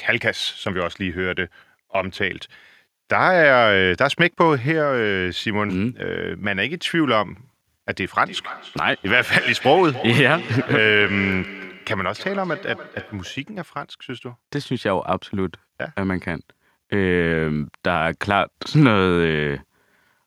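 From 8.25 to 13.53 s there is feedback echo between two devices: one device replays what the other's microphone sent, and that microphone picks it up again. Repeats arrive roughly every third of a second, peaking about 14 dB below the speech. Their fixed spacing distinguishes them from diffuse room reverberation.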